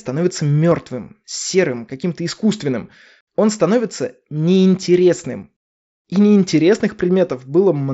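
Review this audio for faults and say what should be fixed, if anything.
At 0.71 s, concealed Bluetooth headset packet loss: one 7.5 ms stretch of the radio link between headset and phone was lost, and the receiver filled the gap by repeating the best-matching piece of the preceding waveform. With only a single short patch, the repair is nearly hidden in the speech. The mSBC headset codec carrying the rest of the audio adds only light grain. To prevent it, keep the headset close to the phone with a clear line of sight and reduce competing 2.4 GHz traffic.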